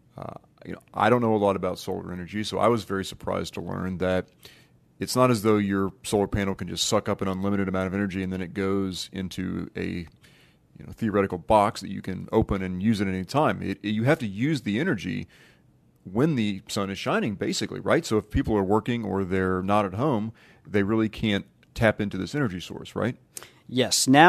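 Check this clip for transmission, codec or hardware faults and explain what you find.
Nothing faulty turned up anywhere in this speech recording.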